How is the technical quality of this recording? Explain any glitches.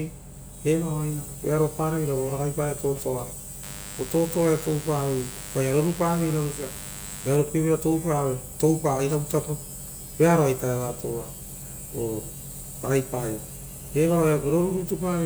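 The recording carries one clear fault, a stretch of mains buzz. From 3.63 to 7.36 s a steady, raspy buzz sits under the speech, only around 15 dB below it. Sharp switching spikes from a dimmer, rectifier or unshielded line enter twice per 50 Hz cycle, spraying harmonics up into the kilohertz range.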